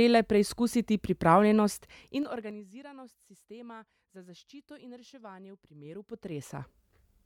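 From 1.95 to 2.60 s the speech level falls by roughly 25 dB in unsmoothed 3 dB steps, about ten per second. From 5.76 to 6.78 s it climbs back in 2 dB steps. Each jump clicks, producing zipper noise that ticks over the voice.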